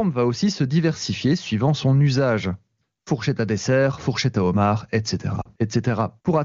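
Lost AMR speech frames at 5.41 to 5.48 s, just after "fourchette à homard etc", break this speech clip. Radio errors corrupted the frames, so the decoder filled the gap by reusing the last good pitch and vocal tract settings at falling gain. The result is a brief fading dip of about 40 ms, which fits two lost 20 ms frames. The surrounding wideband HD Voice audio sounds clear, pointing to a high-rate AMR-WB mode.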